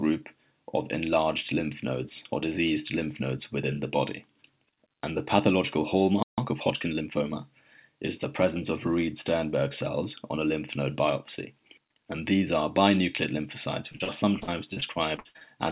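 A playback stall from 6.23 to 6.38 s cuts the sound off mid-flow for about 150 ms, likely because the player ran short of buffered data. Time-compressed catch-up follows from 6.38 to 7.36 s: the player trims its backlog by splicing out small pieces, so the audio runs about 1.15 times faster at unchanged pitch. Repeated packet loss from 13.92 to 15.43 s produces choppy, robotic sound. Short holes keep recurring, the longest about 56 ms, each patched by stretching the preceding sound, so roughly a quarter of that stretch is concealment. Throughout, the band stops at 4 kHz, consistent with a G.711 mu-law call path at 64 kbps.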